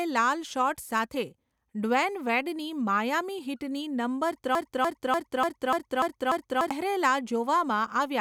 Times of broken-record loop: 4.55-6.71

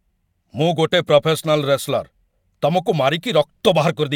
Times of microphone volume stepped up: none

